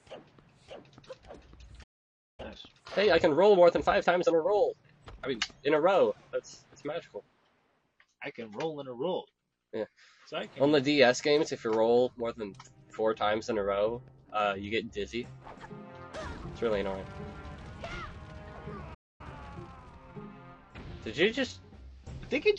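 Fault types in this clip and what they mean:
playback stall: the output drops to silence for about 0.55 s at 1.83 s and 0.25 s at 18.94 s, likely from starved playback; flat-line gaps on waveform and spectrogram.
time-compressed catch-up: after each stall the audio runs hurried at normal pitch, 1.1x for 3 s then 1.25x for 1 s; spectrogram shows compressed events, unchanged harmonic spacing.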